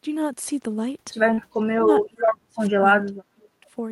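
At 1.33 to 1.39 s there's a short concealed packet loss. About 40 ms of audio never arrived in time, so the decoder carried the previous sound forward to cover it, and you hear a quick smear. The same thing happens again, more briefly, at 2.25 to 2.30 s, with about 20 ms patched over.

From 1.61 to 2.86 s the speech drops away, sinking as much as about 35 dB. That's most likely speech suppressed in double talk: the echo canceller couldn't separate the talker from the far side and pulled both down. It happens again from 3.02 to 3.66 s, with dips of about 30 dB.

At 2.04 to 2.08 s there's a faint scrap of echo leak, a copy of the speech delayed 431 ms and about 20 dB down. It's likely a loudspeaker echo that slipped past the canceller.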